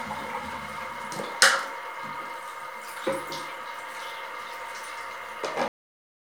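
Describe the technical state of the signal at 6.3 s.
At 6.3 s the signal is in a cut-off end. The final buffers of the recording were never written or played back, so from 5.68 s to the end of the file there is nothing but digital silence. The sound stops abruptly in the middle of what it was doing at 5.68 s, with no decay or fade, and the silence then runs unbroken through 6.3 s to the last sample.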